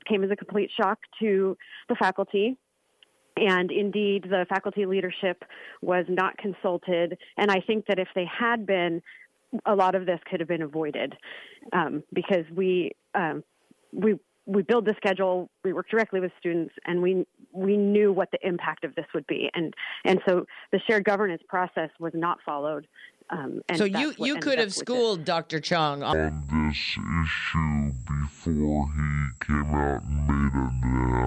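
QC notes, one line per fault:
26.13 to 31.27 s, wrong sample rate: the final stretch of audio suddenly runs at half speed and drops a full octave, 12 semitones, lasting to the end of the clip. Speed and pitch fall together by exactly the same ratio, which fits samples captured at 48 kHz being clocked out at 24 kHz with no conversion. That lockstep change sets it apart from a pitch-shift or time-stretch, where one would move without the other.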